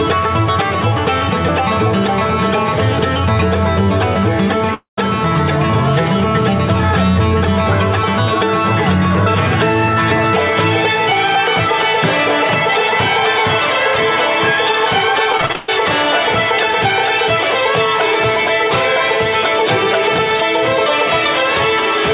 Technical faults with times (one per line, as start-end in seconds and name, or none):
4.74-4.98 long network dropout
15.32-15.69 repeated packet loss (robotic sound)